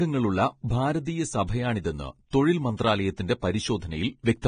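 Speech sounds hissy and grainy throughout, with nothing above 9.7 kHz: likely heavy Vorbis compression, at a rate fitting about 23 kbps.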